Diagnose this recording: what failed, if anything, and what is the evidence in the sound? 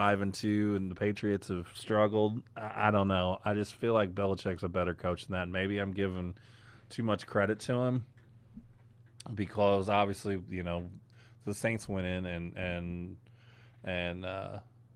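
From 0.89 s, right after "and two and", the speech goes dull and muffled to the end. That's de-emphasis applied wrongly in the call processing or codec chain: a treble cut meant to undo pre-emphasis hit audio that never had any, or was applied twice, leaving 10 kHz about 8 dB below 1 kHz.

On the network side there's a short concealed packet loss at 1.13 to 1.17 s, heard as a brief smear. About 20 ms of audio never arrived in time, so the receiver papered over the gap by carrying the previous sound forward, then blended back into the real signal.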